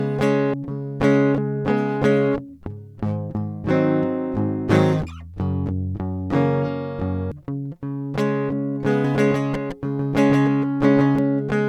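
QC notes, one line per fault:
0.54 s and 7.32 s: compressed frames skipped. The music lurches forward at each point, with roughly 0.7 s missing, about ten frames of 92.9 ms each.
9.05–11.19 s: doubled audio track. A flat, full-band copy of the music trails about 150 ms behind, roughly 5 dB quieter, with no decay or room colour, starting and stopping abruptly. Likely a second capture through a slower path mixed in.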